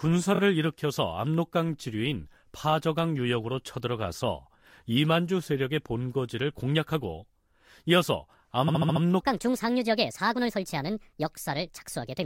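At 0.34 to 0.39 s there are repeated frames: a 23.2 ms block plays twice more, adding 46.4 ms, which fits a single compressed frame being duplicated. It is heard as a quick stutter. At 8.67 to 9.02 s a longer 69.7 ms block, consistent with about three frames, plays five extra times and adds 348 ms, giving a stutter. On a waveform both show identical copied segments laid end to end, and a spectrogram shows the same slice tiled repeatedly.

From 9.20 s to the end, the section at the wrong speed runs 1.4 times too fast, so pitch rises by roughly five semitones and the speech turns high and hurried. The likely cause is that this part was fitted to the wrong clock during editing or playback. On a spectrogram the harmonics and formants jump upward and the syllables compress horizontally at 9.20 s. The waveform's envelope shows shorter, more tightly packed bursts from that point on.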